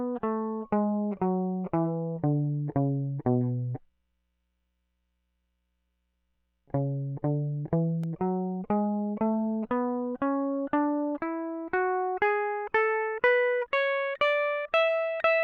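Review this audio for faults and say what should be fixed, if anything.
At 8.04 s the music drops to a block of digital silence for 1.33 ms, which fits an unfilled 64-sample buffer. It is heard as a tick. The waveform shows a brief flat run of near silence, and the spectrogram shows a thin vertical broadband line. To prevent it, give the audio callback more buffer headroom so every block is filled on time.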